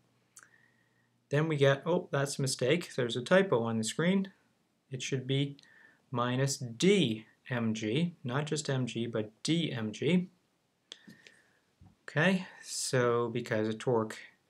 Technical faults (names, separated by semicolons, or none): none